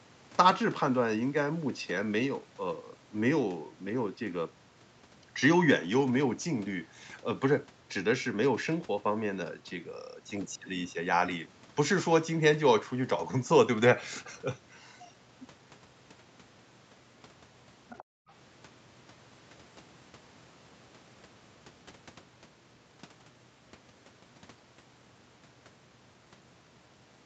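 At 17.9 s, for about 0.13 s until 18.03 s, a faint second voice slips in underneath the speech, sitting roughly 25 dB below it. This is the other side's voice leaking through: the far end was likely being played on a loudspeaker and the echo canceller did not strip all of it out of the microphone signal. On a spectrogram it appears as a weak, separate set of harmonic traces overlapping the main speech, topped at 8 kHz like everything else in the call band.

Straight after, from 18.03 to 18.29 s, the background is gated by the echo canceller. Having detected loudspeaker output, it clamped the microphone down hard, so the room tone collapses by as much as about 40 dB before springing back, with roughly a third of a second affected in total. It sounds like the background momentarily vanishing into dead silence. The waveform shows the noise floor pinched to a near-flat line, and the spectrogram shows a dark vertical gap across all frequencies.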